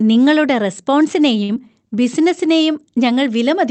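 At 1.43 s a short stall from a late packet begins. It runs to about 1.62 s. A packet of this speech did not arrive on time, so the jitter buffer ran dry. The receiver held the last sound for about 55 ms while it waited. Playback then resumed from the same point, so nothing is lost. The sound is simply drawn out, with a faint buzz or dip. The delay grows by about 55 ms.

At 1.55 s, inside that stall, a short concealed packet loss occurs. About 20 ms of audio never reached the decoder in time. The receiver covered the gap by extending what came before. It copied the pitch where the sound was voiced and used shaped noise where it was not. Then it blended back into the real signal. The result is a brief smear or wobble. A short consonant there may drop out.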